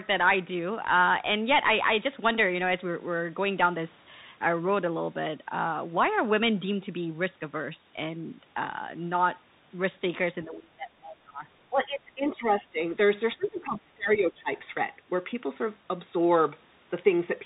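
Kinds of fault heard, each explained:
Bluetooth CVSD headset codec: This damage runs through the whole clip. The codec sends one bit per sample, saying only whether the waveform should step up or down, and the step size adapts as it goes. The sound fits a 64 kbit/s CVSD stream. Nothing passes above about 4 kHz, so the speech is narrow and dull. A grainy hiss sits underneath. S sounds turn scratchy. Loud, bright passages distort where the steps cannot keep up.
Speech suppressed in double talk: The talker's voice sinks sharply three times, from 10.44 to 11.45 s, from 11.7 to 12.79 s, and from 13.36 to 14.5 s. Each dip lasts about a second. The deepest drops are roughly 25 dB, 15 dB and 20 dB. The likely cause is an echo canceller meeting both sides talking at once. It could not tell the talker from the loudspeaker echo, so it turned everything down.
Other side's voice leaking through: A short scrap of a second voice appears from 13.43 to 13.49 s. 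It is very faint, around 30 dB below the main speech. It falls inside the third dip, where the talker is already pushed down. This is likely loudspeaker sound from the far end that reached the microphone and was not fully removed by the echo canceller. Only a brief fragment gets through.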